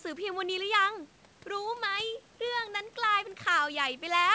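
Listening closely to this speech, nothing stood out, and the absence of anything above 8 kHz simply reflects the call path it travelled through.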